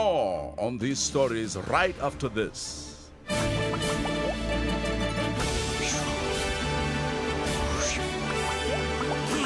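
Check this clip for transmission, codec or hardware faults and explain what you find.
No transmission, codec or hardware faults turn up in this clip.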